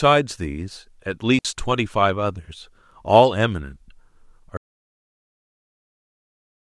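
At 1.39 s the digital wireless link briefly loses too much data, so the receiver mutes rather than pass corrupted audio. The result is a digital wireless dropout: a 60 ms hole of near silence in the speech, faded in and out quickly, with no noise burst on either side.

From 4.57 s to the end of the clip, the input feeding the recorder was likely lost, through a disconnection, failed link or stray mute, while silence kept being written. This audio dropout to silence cuts the speech off mid-flow, leaving total silence with no room tone until the end.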